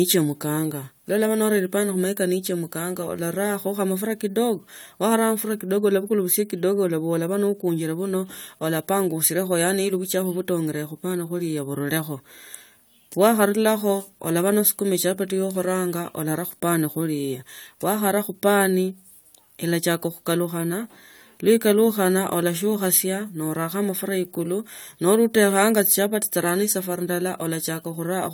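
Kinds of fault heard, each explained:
Nothing stood out on listening to this speech recording.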